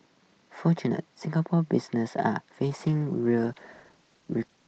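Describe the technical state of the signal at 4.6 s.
At 4.6 s you're near the end of a call bitrate drop, which starts at 2.64 s and runs to the end of the clip. The bandwidth estimate fell and the encoder got starved of bits, and the sound fits Opus going from about 32 kbps down to about 15 kbps. Around 4.6 s the speech is coded much more coarsely, so it comes across rough and watery. The earlier part reaches up to about 8 kHz.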